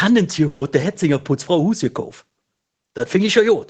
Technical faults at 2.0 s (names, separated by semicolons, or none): none